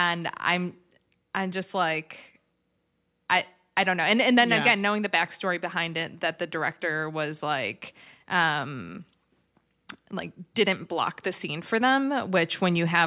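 No dropouts, clipping, glitches or other technical faults can be heard at any point in this recording.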